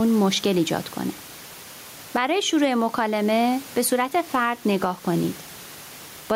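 Speech recorded with gain pumping running through the whole clip: the room noise sits about 29 dB below the speech, and the gain swings by roughly 10 dB. The likely cause is microphone gain set far too high, with a fast limiter or compressor clamping down on each loud syllable, which squashes the level range.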